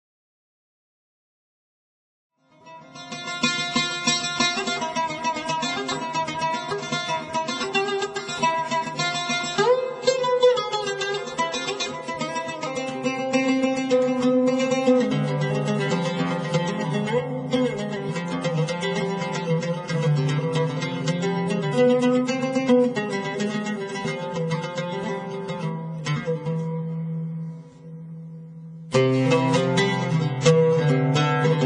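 No technical faults can be heard in this audio. The level rises in a smooth fade from around 2.5 s until 3.76 s, with no click or hard edge.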